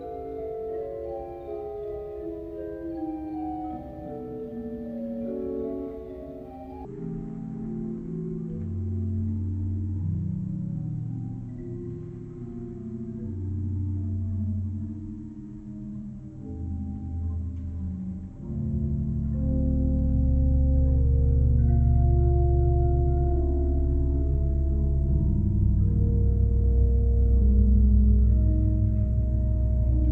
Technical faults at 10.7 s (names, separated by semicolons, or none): section at the wrong speed